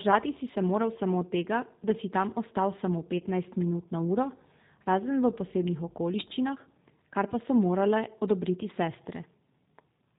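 A speech clip that sounds slightly rough and synthetic throughout, with nothing above 4 kHz, the mark of the G.729 codec, whose plainly audible coarseness fits an 8 kbit/s pulse-coded vocal tract model. Between "si tam ostal samo" and "minut na uro", from 3.18 to 3.23 s, the sound briefly smears into a buzzy tone or coloured noise that fades, the signature of VoIP packet loss concealed by the speech codec, consistent with about 20 ms of lost audio.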